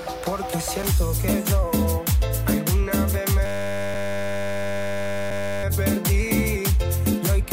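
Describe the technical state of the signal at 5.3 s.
At 5.3 s a system hang loop (3.46 to 5.64 s) repeats one 10 ms slice exactly, giving a steady 100 Hz buzz rather than dropouts or irregular stutter.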